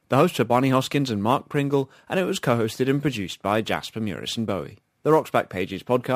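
A fine hiss and grainy roughness ride on this speech throughout, swelling on loud and sibilant sounds and vanishing in pauses. That is sample clock jitter: a converter clock wandering by several microseconds mistimes samples, leaving an error roughly 30 dB below the signal.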